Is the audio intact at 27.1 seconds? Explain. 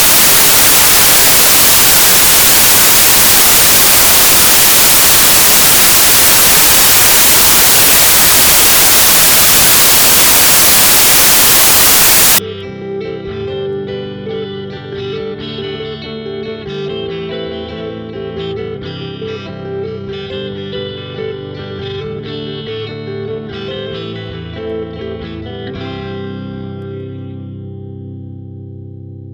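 Yes, the audio at 27.1 seconds is intact, with no dropout, click, distortion or other fault at that moment.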